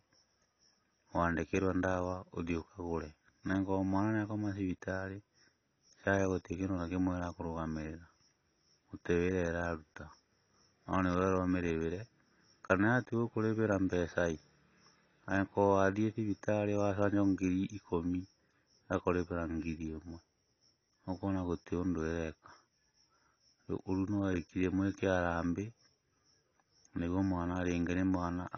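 Speech throughout shows AAC compression: nothing above 6.6 kHz, with smeared, warbling sibilants that set it apart from a simple low-pass filter, likely a low-bitrate AAC-LC encode near 24 kbps.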